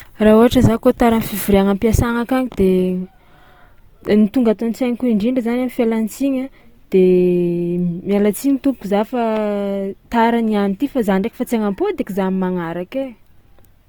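Opus compression, throughout: the speech sounds plainly grainy and rough, with upper bands noise-filled rather than detailed. This is likely Opus music mode at a rate that fits roughly 24 kbps.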